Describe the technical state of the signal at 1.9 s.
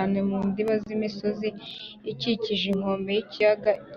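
A background task is stalling the USB bus or audio driver every 1.02 s from 0.68 to 3.76 s, so 1.9 s falls within a run of periodic USB or driver dropouts. Each stall replaces about a millisecond of speech with silence, heard as a regular tick.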